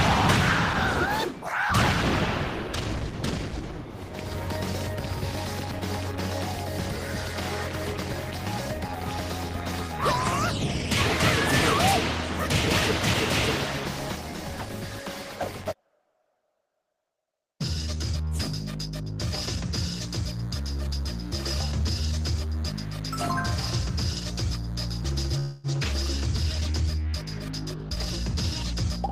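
From 19.82 to 25.28 s a thin, steady buzz sits under the sound at about 25 dB below it. This is DECT cordless phone buzz. A nearby DECT handset or base fires a radio burst every 10 ms, and the audio circuitry rectifies it into a 100 Hz tone rich in harmonics. Unlike mains hum at 50 or 60 Hz, it has a harsher, reedier edge.

From 25.39 to 25.67 s the audio stalls. The last sound is stretched into a fading tail for about 244 ms, with no dead silence, and then it resumes where it left off. This is a call audio freeze, likely caused by packets held up in transit so that the jitter buffer ran dry. What marks it out from a dropout is that nothing is lost. A pause is inserted, pushing everything after it about 244 ms later.

Between 27.74 and 28.06 s the sound rushes forward at about 128% of normal speed while its pitch stays put. This is a jitter buffer speed-up. The receiver, holding more audio than it wanted, trimmed many tiny pitch-period slices, roughly a tenth of a second in total, to catch up. 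A tape-style speed change would raise the pitch too. Here only the timing compresses, so the passage sounds hurried rather than chipmunk-like.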